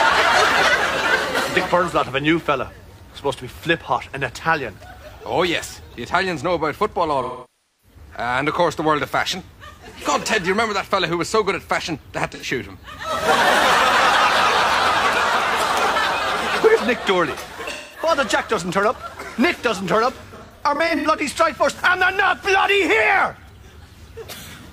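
AAC frame loss with concealment at 7.22–7.97 s, 12.32–12.45 s, 17.70–18.08 s and 20.27–21.07 s. The decoder patched missing frames from the last good spectrum, giving smeared, noisy patches. The last one is scattered dropouts, the longest run around 0.1 s.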